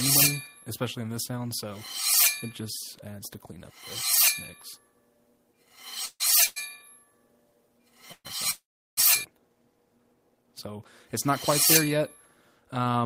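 Four call audio freezes occur, at 6.05, 6.46, 8.12 and 8.51 s. Each stretches the last sound into a fading buzz, then resumes where it stopped. Nothing is lost. The last, 0.47 s, fades to silence. The likely cause is delayed packets emptying the jitter buffer.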